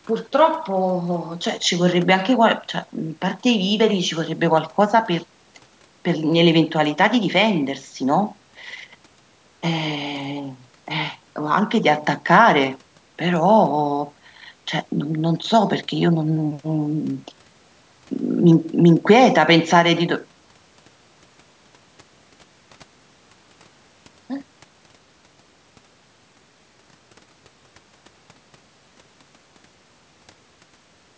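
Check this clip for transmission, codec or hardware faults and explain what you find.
No transmission, codec or hardware faults can be heard in this speech. It has passed through a call's microphone processing, which trims the lowest bass and leaves nothing above 8 kHz, as that path normally does.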